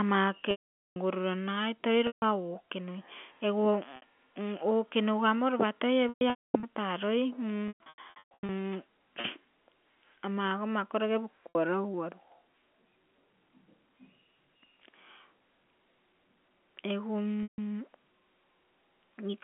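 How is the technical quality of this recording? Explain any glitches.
The recording has repeated dropouts from packet loss with pitch repetition, at 0.51–0.96, 2.07–2.22, 3.96–4.02, 6.09–6.63, 7.68–8.49, 9.21–9.24, 11.50–11.55 and 17.43–17.58 s. The speech comes through the G.711 telephone line band of about 200 Hz to 3.4 kHz. When packets go missing, the receiver loops the last pitch period. The short gaps of 30 to 60 ms sound like a brief buzzy hold. The 150 ms gaps and the 450 ms loss at the start fade into silence, and speech returns with a cross-fade. At 6.09 and 7.68 s the losses are scattered over 540 and 810 ms. On a waveform the held stretches show as identical repeating cycles shrinking in amplitude. On a spectrogram they appear as flat, unchanging harmonic stripes that fade to a blank gap.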